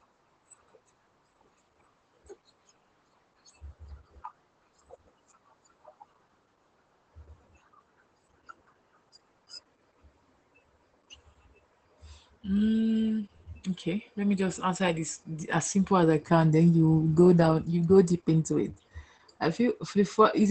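From start to finish the speech carries Opus voice compression in its SILK mode. Nothing survives above 8.7 kHz, the wideband ceiling, and the coarse coding of the excitation leaves the voice hoarse and faintly robotic, which fits a bitrate around 12 kbps. A simple low-pass filter would only dull the top. Here the damage also sits inside the remaining band, as a hoarse, slightly robotic quality that filtering alone cannot produce.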